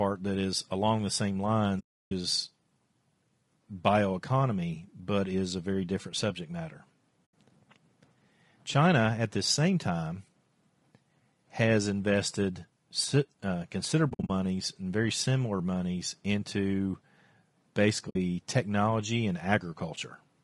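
A speech recording with the rough, grainy texture and noise between harmonics of low-delay AAC compression, likely AAC-ELD at a low rate near 32 kbps. AAC frame loss with muting leaves soft-edged holes: 320 ms at 1.79 s after "is along the same", 80 ms at 7.26 s after "very different subject matter", scattered gaps from 14.09 to 14.30 s, and 60 ms at 18.09 s before "technology and".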